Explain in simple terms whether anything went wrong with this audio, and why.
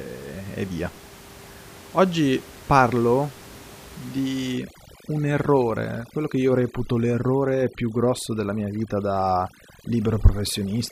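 From about 4.54 s to the end, overdone noise removal sets in: a noise reducer pushed too hard cuts out frequency bands it mistakes for background, taking quiet parts of the speech too. The background noise drops and breaks up into twinkling specks. Before that point the room noise is still audible.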